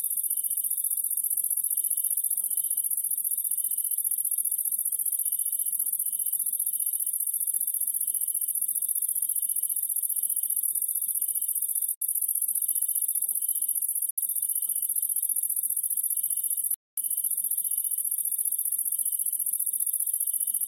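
Bluetooth dropouts occur at 11.94 s and 14.11 s, each a silent hole of about 70 ms, and a longer one at 16.74 s lasting about 230 ms. The sound cuts out abruptly and resumes further along, as though it had kept playing through the gap. The likely cause is audio packets arriving too late at the headphones and being discarded. The short gaps fit about three lost packets each and the long one about ten.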